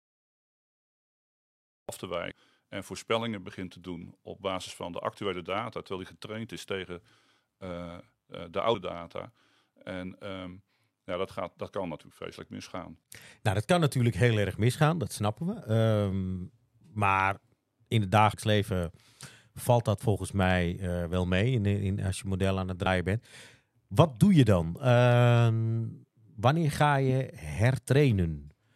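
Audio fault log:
0.00–1.89 s, cut-off start: The recording or stream began late, so the clip opens on digital silence and the speech enters abruptly at 1.89 s, mid-sound, with no natural attack or fade-in, as though switched on partway through.
2.30 s, 18.32 s (after "in het"), 22.85 s (after "je model aan het"), compressed frames skipped: The decoder skipped whole compressed frames, so the speech jumps ahead by about 200 ms, 100 ms and 70 ms. That fits 23.2 ms frames, seven, four and three respectively.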